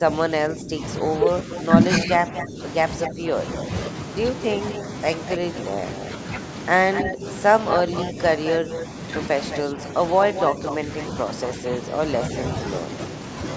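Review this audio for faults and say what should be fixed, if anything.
Speech suppressed in double talk: from 0.0 to 5.82 s (about 2 s affected in total, dips up to about 10 dB) and from 7.02 to 12.66 s (about 1.5 s, up to about 5 dB), the voice sinks and thins in patches. The likely cause is an echo canceller that cannot separate local speech from loudspeaker echo during overlap and turns both down. Unlike packet-loss dropouts, these are level dips that track the overlapping talk, with no clicks or robotic fill. To prevent it, use an echo canceller with better double-talk detection and less aggressive residual suppression.

Echo leak: a delayed copy of the voice, trailing by about 242 ms, appears from 1.56 to 3.11 s at about 10 dB below the speech and from 4.7 to 11.03 s at about 5 dB below. A brief scrap at 12.21 to 12.26 s trails by about 216 ms at about 15 dB below. This is likely loudspeaker sound that the far side's echo canceller failed to remove and sent back. 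Unlike room reverberation, it is a distinct repeat at a fixed delay, not a smooth decaying tail. To prevent it, tune the far-end echo canceller or use a headset there.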